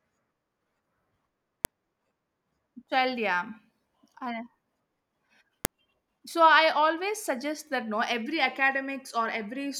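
At 1.65 s and again at 5.65 s a sharp, loud snap cuts through the speech: a file header played as audio, where header bytes from joined pieces were decoded as samples. The exact 4.0 s spacing, regardless of the speech, separates it from random dropout clicks.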